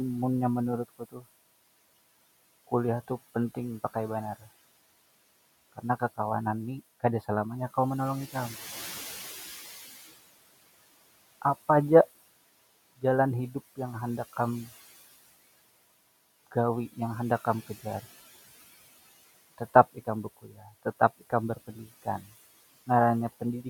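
Throughout the speech, the background noise pumps down between phrases and swells back under them. These are noise suppressor artifacts from bands being cut by about 17 dB. From 0.89 to 1.26 s, and again from 20.24 to 20.84 s just after "tetap ikam", parts of the speech turn faint and swallowed for about a fifth of a second each. This is speech cut by the noise suppressor, which mistook those sounds for noise and pulled them down by about 20 dB. The room noise, sitting about 18 dB below the speech, is what the suppressor is chasing.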